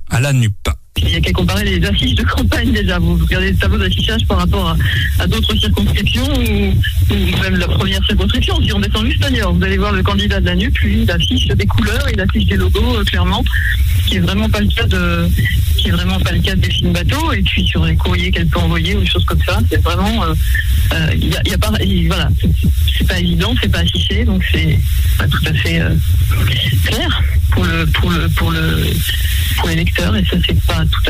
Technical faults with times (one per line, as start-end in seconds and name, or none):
none